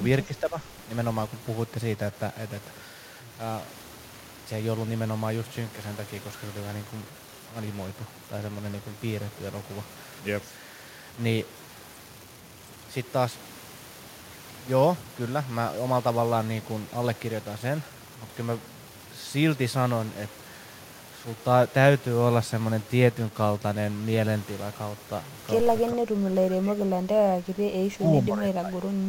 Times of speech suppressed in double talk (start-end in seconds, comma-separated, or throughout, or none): 0.27-0.58, 25.92-27.06, 27.97-28.91